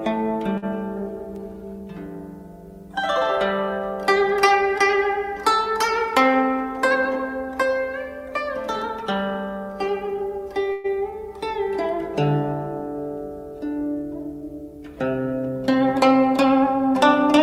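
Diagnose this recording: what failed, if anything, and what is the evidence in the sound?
At the network and jitter-buffer stage, a packet arrived late and the buffer ran dry. From 0.57 to 0.64 s the receiver held the last sound for 50 ms until the packet came, producing this short stall from a late packet. Nothing is missing, but the sound lingers with a faint buzz or dip.

The jitter buffer later held too much audio and trimmed it by cutting pitch-period-sized slices in quick succession. This jitter buffer speed-up appears from 6.03 to 6.50 s at 110% speed, and again from 16.34 to 17.38 s at 104%, each removing roughly 50 ms. The pitch stays the same, but the audio runs faster.

From 10.72 to 10.86 s the sound stops moving forward and the last moment is stretched into a fading buzz or hiss for 119 ms, without dropping to silence, before resuming where it left off. This call audio freeze was likely caused by packets held up in transit, which emptied the buffer and inserted a gap while losing nothing.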